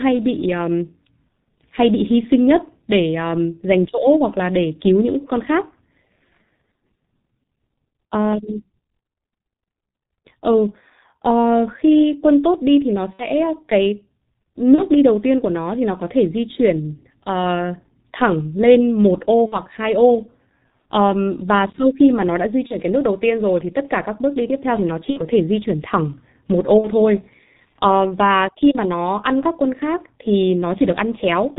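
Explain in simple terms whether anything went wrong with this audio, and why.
The whole recording passes through the G.723.1 codec, an old internet-phone format. Everything above 4 kHz is gone, so speech sounds muffled, hoarse and smeared, unlike plain background noise. At 13.13–13.25, 14.76–14.83, 19.46–19.60, 22.67–22.77, 25.10–25.21 and 26.78–26.89 s, VoIP packet loss concealed by the speech codec turns the speech into a fading buzz or noise that stays weak briefly afterwards, rather than leaving clean silent gaps.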